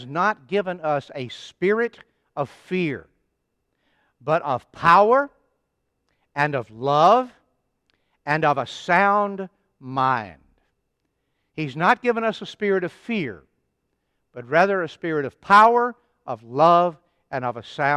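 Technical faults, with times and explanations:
No technical faults can be heard in this speech.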